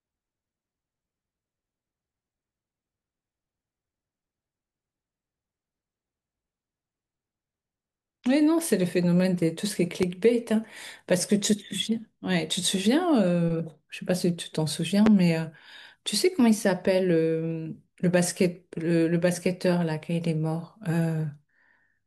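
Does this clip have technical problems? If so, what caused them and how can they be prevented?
Yes. A sudden voltage step, likely from a plug, switch, static discharge or driver glitch, was added to the signal, producing two loud pops, at 10.03 to 10.06 s and 15.06 to 15.09 s. Each is a single sharp thump well above the speech, which carries on underneath, and the second is louder. Prevention: seat connectors firmly before recording, avoid switching or touching equipment mid-take, ground the setup to limit static, and keep audio drivers up to date.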